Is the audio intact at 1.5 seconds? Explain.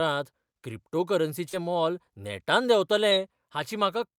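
No. Short concealed packet loss at 1.49 to 1.54 s: about 40 ms of speech never reached the decoder, and the gap was filled by extending the preceding sound, leaving a brief smear or wobble.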